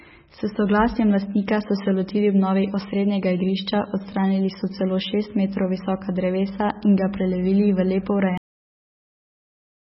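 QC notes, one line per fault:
Throughout: MP3 compression, likely at a very low bitrate, around 16 kbps, with heavy damage. Nothing comes through above about 5.6 kHz, so the speech sounds dull and boxed-in, and the encoder has thrown away a lot of weaker detail to fit the budget. Those thin parts flicker in and out from frame to frame, giving a watery, swirly texture, and consonant onsets come out smeared instead of crisp.
8.38 s: cut-off end. Right after "v lepo" the audio just stops mid-sound and falls straight to digital silence for the remaining stretch to the end, with no natural decay at all. That's the final chunk of audio never making it out, so the playback simply ran dry partway through whatever was being said, and the signal drops off a cliff.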